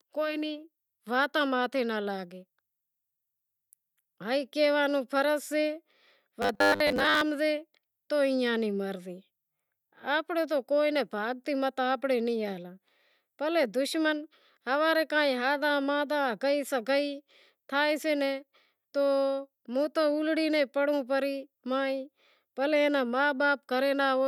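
From 6.42 to 7.21 s the speech collapses into a stiff, metallic drone pitched at 100 Hz, still loosely tracing the syllables before normal audio returns just ahead of "ہمزے تو ایئاں نی". This is robotic sound from repeated short buffers, likely caused by audio arriving too slowly, so playback loops a fragment of about 10 ms while the real signal is skipped. Around two thirds or more of that stretch is repetition rather than fresh audio.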